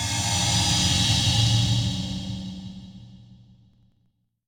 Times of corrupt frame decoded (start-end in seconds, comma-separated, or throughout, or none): 1.36-1.40